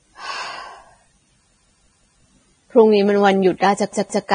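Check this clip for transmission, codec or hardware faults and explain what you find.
Two faults are present: lossy-codec damage across the whole speech clip, and a stutter near its end.

Vorbis compression, throughout: the sound is heavily degraded, with nothing above about 9.7 kHz, which points to a low bitrate near 23 kbps. The encoder likely reduced the upper spectrum to coarsely quantised residue over a smooth floor, so fine treble detail turns into noise of similar energy. The result is a dull, band-limited top with a hissy, grainy texture, roughened tones and softened consonant attacks.

Repeated buffer, 3.93 to 4.27 s: fresh audio failed to reach the output in time, so the last block was replayed instead. The same 0.17 s slice, which fits an 8192-sample buffer, sounds three times in a row, with a hard splice at each restart. This is heard as a short stutter. The stalled audio resumes afterward, so little or nothing is skipped.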